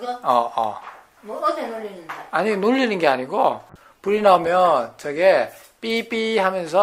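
At 3.7 s a call bitrate drop sets in and lasts to the end: the encoder's rate falls from 128 kbps to about 19 kbps, staying at its lowest for roughly 1.24 s. With so few bits, the codec quantises coarsely and discards upper frequencies, so the sound turns muffled and watery. On a spectrogram the high band empties above a ceiling and the remaining detail looks smeared and blotchy; the waveform's envelope changes little.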